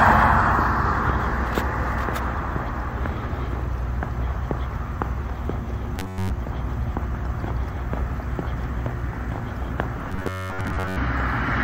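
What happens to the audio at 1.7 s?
Nothing goes wrong at 1.7 s: the audio plays through that moment intact, with no dropout, click, glitch or other fault.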